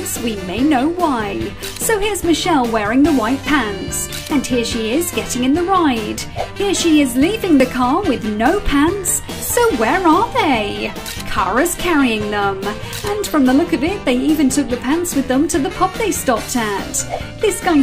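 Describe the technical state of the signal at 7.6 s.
At 7.60 s there is an overlap between stream segments: two segments claim the same 18 ms of time, and the player trims sound that wasn't actually doubled. It's heard as a tiny click or skip. The waveform shows an abrupt step, and the spectrogram a thin broadband vertical line.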